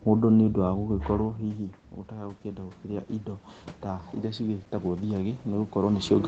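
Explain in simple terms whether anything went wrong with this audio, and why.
Just after "mũndũ nĩ ũndũ", from about 0.65 to 5.81 s, the voice and the background noise slowly swell louder together. This is automatic gain rising: the speaker moved away, so the call's level control heard quieter input and gradually turned everything up.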